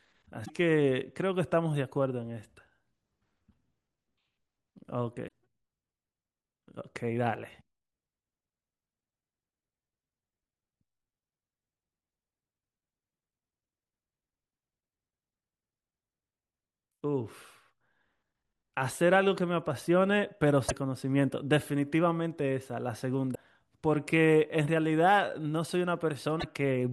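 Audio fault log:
0.42–0.50 s, 5.25–5.31 s, 20.65–20.72 s, 23.32–23.37 s and 26.37–26.44 s: damaged data in a compressed stream. Five short chirps or blips of 50–80 ms break into the speech. At each, corrupted bytes in the compressed stream make the decoder misread its frames and lose sync until it finds the next valid frame header. On a spectrogram each shows as a narrow vertical smear of broadband energy unlike the surrounding speech. In the waveform it appears as an abrupt discontinuity.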